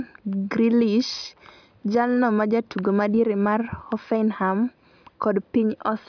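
No technical faults can be heard anywhere in the speech. There is nothing here that needs a timestamp or a closer listen.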